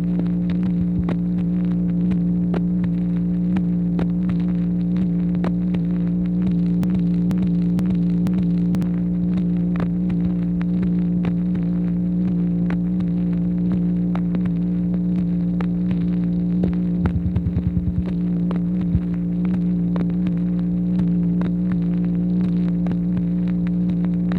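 At 6.83 s the audio falls into a broken-record loop until 8.82 s: a roughly 0.48 s fragment plays four times back to back, identical each pass. Something upstream likely stalled and kept resending its last chunk, so whatever should have played there is gone.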